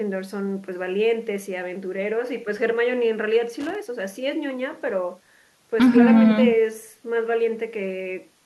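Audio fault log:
3.60–3.75 s, loose connector crackle: a short, irregular burst of scratchy crackle lasting about 0.15 s cuts across the speech. A worn or dirty contact is making and breaking as it shifts, chopping the signal on and off and adding pops from any DC on the line.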